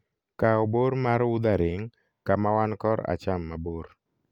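Nothing here trips any of the usual alarms, since the speech runs along without a single moment that gives a listener pause.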